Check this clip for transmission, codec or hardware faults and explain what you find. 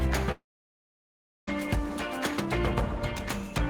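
One fault stands out, a long network dropout from 0.31 s to 1.49 s. The sound briefly carries on as a fading buzz, then goes silent for about a second before resuming. The likely cause is a stalled stream: the receiver stretched the last audio, gave up, and the lost second is skipped rather than delayed. Unlike a brief packet-loss glitch, the gap is long, and the sound never catches up.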